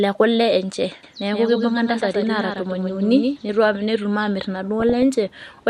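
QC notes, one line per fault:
1.03–3.37 s, doubled audio track: a second full-band copy of the speech sits roughly 150 ms behind the original and about 5 dB quieter, giving a hard slapback rather than a reverberant tail. The copy has no decay and no room colouring, and it cuts in and out abruptly at both ends of the span. The likely cause is the same signal arriving twice, once through a slower parallel path or from an edit that left two misaligned copies.
4.80–5.03 s, DAB burbling: short blips of noise break into the speech for about a quarter of a second. Wrong samples put these blips into single sub-bands, so narrow bands of the spectrum pop up independently. Residual bit errors have slipped past the error protection into the MP2 data, corrupting samples. The spread of the damage fits a short run of around a dozen frames at a low error rate, on the order of a fraction of a percent.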